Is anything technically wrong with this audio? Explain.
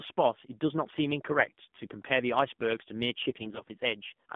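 Yes. AMR narrowband mobile codec, throughout: low-rate pulse-driven vocal-tract coding limits the speech to about 150 Hz–3.5 kHz and sounds buzzy and synthetic, which fits roughly 7.4 kbps.

AMR bit errors, 1.38–1.50 s and 3.26–3.69 s: flipped low-protection bits, around 5–7 percent, misplace pulses and skew parameters, so the speech turns hoarse, scratchy and gargly.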